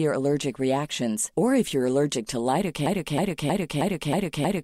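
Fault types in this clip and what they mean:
Broken-record loop: from 2.86 s to the end of the speech, a 316 ms fragment repeats exactly, back to back, six times, which likely means the player or stream stalled and kept resending its last held piece. Whatever should have followed is lost. On a waveform the same envelope shape recurs at identical 316 ms spacing; a spectrogram shows one block of harmonics and formant bands copied side by side, with a hard seam at each repeat.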